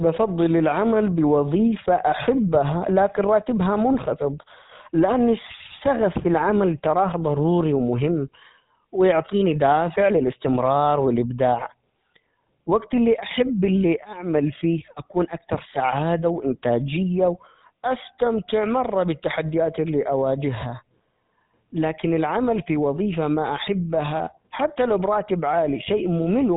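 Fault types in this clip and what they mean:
GSM full-rate codec: The speech runs through the original GSM full-rate codec, which models the vocal tract and excites it with coarse, regularly spaced pulses. The bitrate, which fits 13 kbps, leaves a plainly audible buzzy, gravelly roughness, and nothing survives above 3.8 kHz.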